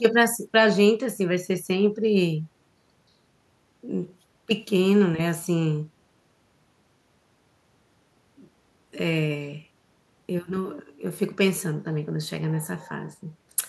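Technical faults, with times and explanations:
No technical faults detected.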